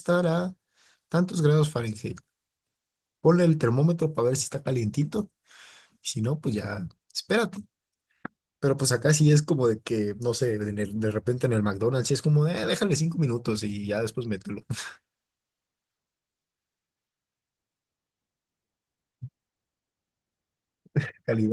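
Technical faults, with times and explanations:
The speech signal has no technical faults; it passes through Opus voice compression working normally in its hybrid mode with the full audio band kept, a sound that fits a rate of around 20 kbps.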